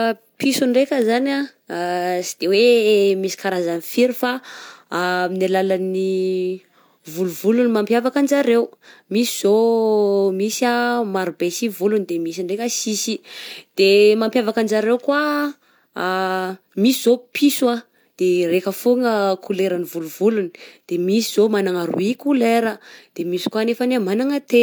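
No technical faults are audible anywhere in this recording.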